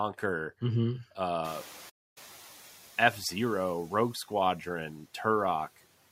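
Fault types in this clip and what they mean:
noise suppressor catching up: About a second and a half in, the background noise jumps by about 24 dB. The suppressor's noise estimate lags, so the noise comes through with less reduction from 1.44 s, then sinks by about 4 dB as it adapts over 1.01 s. Steady room noise would hold its level rather than fade like this.
playback stall: From 1.89 to 2.18 s the output goes completely silent for about 266 ms, background included, then the sound carries on. The player likely ran short of data or was blocked. Unlike a suppressor or gate, which dims only the noise, this cuts everything at once.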